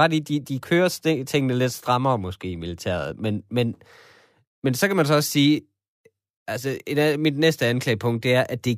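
No technical faults can be heard anywhere in the recording.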